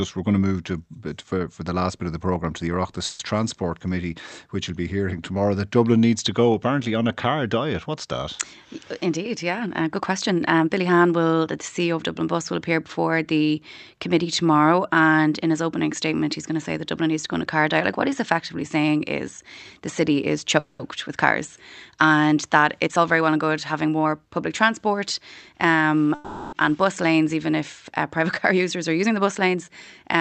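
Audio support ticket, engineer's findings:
Call audio freeze at 3.05–3.21 s, 20.59–20.81 s (after "is the city is", before "with cars and") and 26.15–26.55 s (before "and bus lanes even"). Last sound stretched into a fading buzz or hiss, then resumes where it stopped, adding about 140, 200 and 380 ms of delay. Likely delayed packets draining the jitter buffer.

Jitter buffer speed-up at 9.05–11.00 s (ending before "will the"), 22.63–25.01 s and 28.52–29.57 s. Audio hurried at unchanged pitch, about 7–8% fast. The overfull buffer trimmed pitch-period slices, roughly 150, 200 and 100 ms in total.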